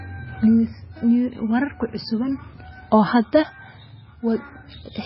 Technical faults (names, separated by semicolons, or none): MP3 compression